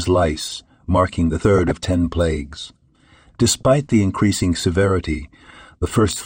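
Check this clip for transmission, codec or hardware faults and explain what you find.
Two faults stand out in this speech clip: a codec-quality problem that runs the whole way through, and two short bursts of reception damage on top of it.

MP2 compression, throughout: the dull, gurgling character is most likely MPEG Layer II coding at a low rate, which fits about 80 kbps. The coder divides the spectrum into 32 sub-bands and shares out too few bits, so upper bands drop out and flicker while the remaining ones are coarsely quantised. The result is plainly audible: muffled top end and a granular, watery texture under the speech.

DAB burbling, 1.58 to 1.86 s and 3.60 to 3.68 s: bit errors have slipped past error correction into the MP2 data, corrupting samples so individual sub-bands get short blips of noise. The longer first burst sounds like a run of damaged frames, consistent with a bit error rate around half a percent. 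The second is brief and slightly lighter.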